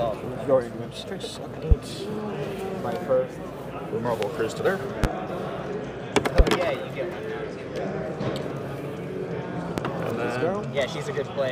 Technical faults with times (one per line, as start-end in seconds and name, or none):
1.71-1.75 loud pop
4.23-4.26 loud pop
5.04-5.08 loud pop
6.39-6.43 loud pop
9.78-9.82 loud pop